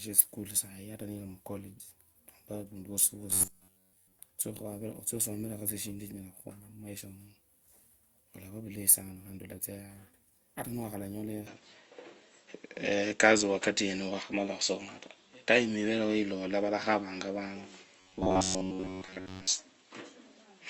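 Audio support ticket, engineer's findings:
Robotic sound from repeated short buffers at 3.31–4.19 s and 18.00–19.47 s. Input audio likely arriving too seldom, so playout loops the last block of roughly 10.7 ms and skips most of the real signal. The result is a rigid metallic buzz at 93.8 Hz, following the speech only loosely.

Input switched to a poorer device at 11.47 s, lasting to the end. Capture likely moved to a lower-grade mic or a headset call profile. The narrower band turns the tone duller. Level shifts by around 5 dB, a new noise floor sits about 50 dB down, and there is no gap at the switch.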